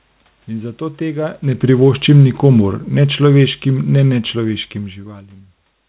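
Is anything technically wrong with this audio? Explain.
Yes. From 1.54 s to 4.72 s the automatic gain is falling: the gain control judged the input too loud or its background noise too strong and pulled its gain down gradually, by about 8 dB over those three seconds, so the speech starts loud and steadily sinks. What separates this from a talker moving away from the microphone is that the room noise sinks with the voice at the same rate. A change in distance would leave the background level steady.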